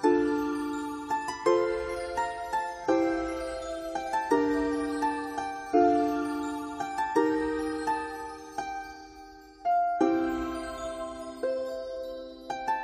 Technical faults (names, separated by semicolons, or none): none